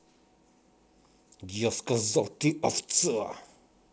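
A short speech recording with no technical fault to point to. It has come through G.722 wideband telephone coding at 64 kbit/s, which keeps the voice band open up to about 7 kHz, with at most a faint trace of the codec in the upper range.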